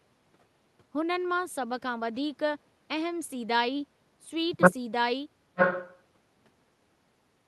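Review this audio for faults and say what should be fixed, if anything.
From 4.21 to 4.30 s the speech dips by around 10 dB for about a tenth of a second and then recovers. This is speech suppressed in double talk, likely caused by an echo canceller that could not tell the near talker from loudspeaker echo while both sides were active, so it attenuated everything. To fix it, tune the canceller's double-talk detector so it holds near-end speech at full level instead of suppressing it.

From 5.56 to 5.94 s a delayed copy of earlier speech returns, lagging the original by 928 ms and sitting roughly 5 dB below the live speech. This is echo leak, likely caused by the far end playing the call on a loudspeaker while its echo canceller failed to remove all of the signal its microphone picked up. To fix it, improve echo cancellation at the loudspeaker end, with a longer adaptive filter or stronger residual suppression, or have that side use a headset.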